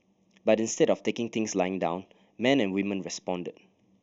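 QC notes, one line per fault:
Throughout, channel delay (comb filtering): one channel trails by about 0.3 ms, and summing to mono notches the speech near 1.5 kHz and above, sounding hollow.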